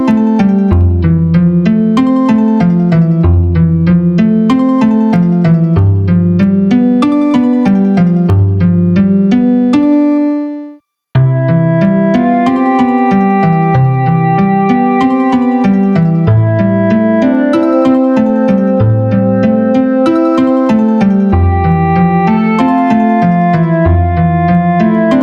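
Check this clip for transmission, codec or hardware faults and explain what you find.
Gain pumping runs through the whole clip. The likely cause is input gain set far too high, with a fast limiter or compressor clamping down on every loud sound. The gain swings by around 10 dB under loud moments, flattening the dynamics into a squashed, breathing sound.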